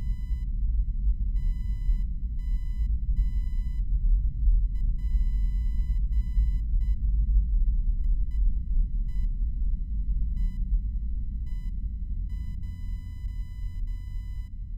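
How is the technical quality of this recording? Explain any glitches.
Computer activity noise is present throughout the recording. Changing load from the processor, graphics card or mouse disturbs the ground the audio circuit shares with the computer, so a faint buzzing chirp pulsing at around 1 kHz rides roughly 40 dB below the sound, following the machine's activity rather than the audio itself.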